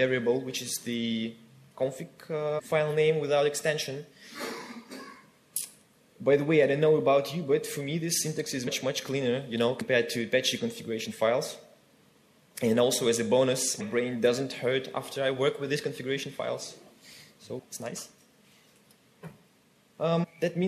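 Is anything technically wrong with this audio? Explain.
Yes. Compressed frames are skipped at 2.58–2.60, 8.66, 9.80, 13.79 and 20.23–20.25 s. Whole coded frames never reach the output, either missing from the stream or rejected by the decoder as damaged, so playback jumps forward. The gaps sound like roughly 400, 100, 100, 150 and 200 ms of lost audio, which fits runs of 23.2 ms frames. Each join is a sudden jump in the sound, marked by a brief blip or click.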